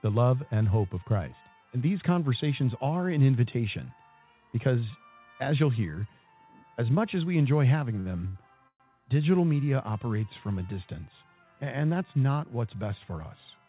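Just after 8 seconds there are two short stalls from a late packet, at 8.00 to 8.07 s and 8.27 to 8.42 s. Each time the next packet hadn't arrived, the jitter buffer ran dry and the receiver held the last bit of sound going, about 53 ms and then 74 ms, before resuming right where it left off. Nothing's lost, but you hear a brief smeared hold with a faint buzzy edge, and the timing slips back a little each time.

Then at 8.68 to 8.82 s there's a call audio freeze. Here the receiver stretched the last sound for roughly 120 ms as a fading buzz, ending in about 70 ms of silence, before the audio picked up again with nothing dropped. It's likely down to packets being held up in transit long enough to empty the buffer, so it reads as a small hole punched into the flow. The whole thing sits inside a band-limited call sound with nothing above 4 kHz, consistent with a 64 kbps G.711 mu-law path.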